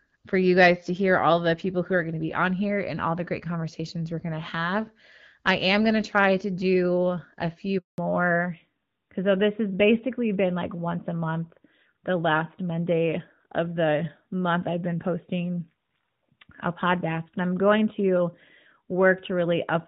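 At 7.78 s, right after "to do a few", a handover gap cuts the speech to silence for 200 ms while the network switches, with no frames arriving. The waveform shows a flat line until 7.98 s.

From 7.98 s to the end, a fallback to narrowband follows. The lightly coded HD Voice wideband sound, consistent with AMR-WB at 12.65 kbit/s, gives way to a duller, rougher narrowband codec that fits AMR-NB at 12.2 kbit/s. On the spectrogram, everything above 4 kHz is abruptly cut off.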